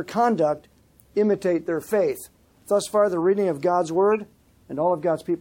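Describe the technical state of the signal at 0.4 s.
At 0.4 s the signal is intact, with no audible fault at that moment.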